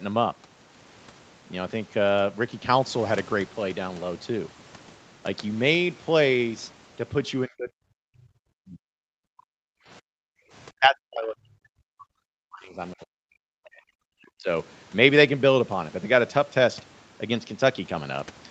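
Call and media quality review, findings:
Speech suppressed in double talk, 7.46–8.35 s, 8.55–9.04 s, 10.06–10.16 s, 10.79–13.39 s, 13.61–14.48 s. Speech dips by up to roughly 40 dB or chops out in pieces, longest stretch near 2 s of loss. Likely cause: echo canceller's suppressor treating simultaneous near-end speech as echo and attenuating both. Distinguishing cue: the talker's own voice breaks up mid-phrase, not just the room tone between phrases.

Background gated by the echo canceller, 9.32–9.84 s (about 36 dB down) and 10.38–10.51 s (about 26 dB down). Room sound drops out briefly while far-end playback is active, then returns once the canceller releases. Distinguishing cue: the loss falls in the background between speech, short, unlike the dropouts within speech around it. Both sit on an Opus call path with nothing above 8 kHz.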